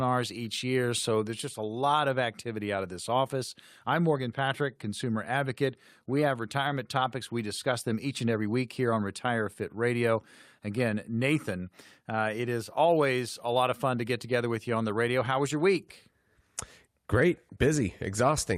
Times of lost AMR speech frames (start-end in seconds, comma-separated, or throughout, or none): none